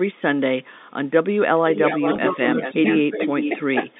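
From 1.57 to 2.8 s the speech dips and loses pieces, by up to about 10 dB. This is speech suppressed in double talk. Both ends were likely talking at once. The echo canceller could not tell the near talker from loudspeaker echo, so it turned everything down. It happens again from 3.1 to 3.53 s, also by up to about 10 dB. A brief dip of about 5 dB follows at 3.75 s.

An echo leak overlaps the first dip, from 1.74 to 2.3 s. A copy of the speech returns 410 ms late, only about 5 dB below the speech. It is likely a loudspeaker at the far end, whose echo canceller let part of the pickup through and sent it back. It returns from 2.62 to 2.96 s at about 10 dB down, and from 3.19 to 3.65 s at about 5 dB down. A last trace, about 30 dB down and barely audible, runs from 3.9 s to the end.

At 2.16 s a 20 ms gap, which fits one lost packet, is bridged by packet loss with pitch repetition. The receiver repeats the last pitch cycle to fill the hole. 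It is heard as a short, slightly buzzy held tone before the sound resumes. All of this passes through the 200 to 3.7 kHz band of G.711 telephone coding.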